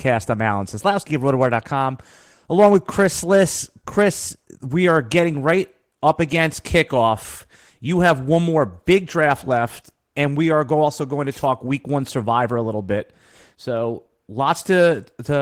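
The whole speech clip carries Opus voice compression in hybrid mode, with the upper band coded thinly. It sounds hoarse and slightly robotic, which fits a rate around 16 kbps.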